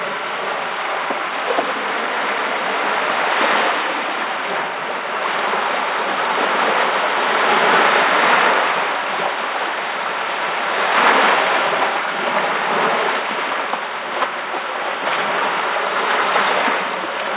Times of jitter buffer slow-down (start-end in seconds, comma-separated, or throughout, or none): none